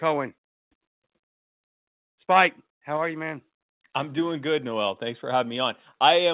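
Most likely the call software stepped the microphone volume down at 2.97 s, cutting input gain in one move. Just before "are you man I'm", speech and background drop together by about 2 dB and stay lower, heard through a call path carrying nothing above 4 kHz.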